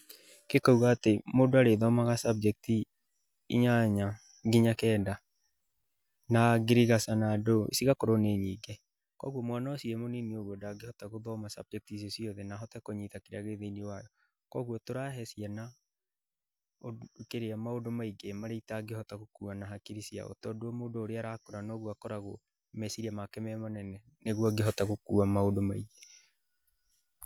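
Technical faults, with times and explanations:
8.22–9.24 s, zipper noise: the speech is lowered by roughly 10 dB in 1 dB jumps, around twenty a second. Each unsmoothed jump clicks, giving a rapid ticking.
23.78–24.66 s, zipper noise: the level rises by roughly 10 dB in the same 1 dB steps, and the same zipping rides on the speech until the gain settles.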